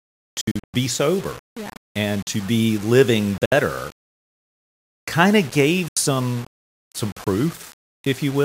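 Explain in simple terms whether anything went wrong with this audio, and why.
A couple of things went wrong. The whole speech track has a gritty, grainy edge that rides along with the voice, and the quiet bits crackle or cut out. That's most likely low bit depth without dither: the audio was stored with only a handful of levels, around 6 bits' worth, and rounded without any smoothing noise.

There are also three short holes where the sound drops out and picks up again as if it had kept playing. The first, from about 0.41 to 0.74 s just before "sober yeah and to", is a cluster of several gaps, the longest about 80 ms. Then come single gaps at 3.46 to 3.52 s right after "and to be living", and 5.88 to 5.97 s after "kind of gave". These look like a Bluetooth dropout, likely from audio packets not reaching the headphones in time.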